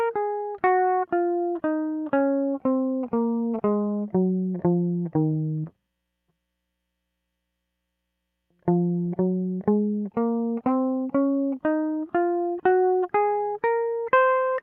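Listening through the music, nothing stood out as a technical problem at any point.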